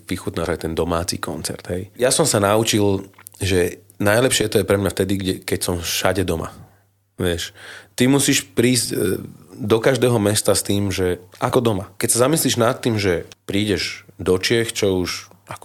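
Compressed frames skipped at 0.45–0.48 s, 1.99–2.04 s (before "som sa naučil"), 4.41–4.45 s, 8.85 s (after "ty musíš") and 11.49–11.54 s (after "mesta s tým že"). The speech jumps ahead by roughly one or two whole frames, which points to 20 ms frames.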